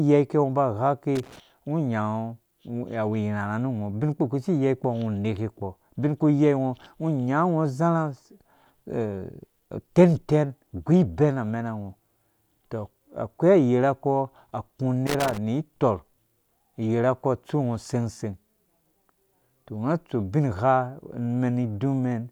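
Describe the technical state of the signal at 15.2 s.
Loose connector crackle runs from 15.07 to 15.38 s, about a third of a second. A worn or dirty contact in the signal path is making and breaking as it shifts, chopping the speech. The result is an irregular burst of scratchy crackle.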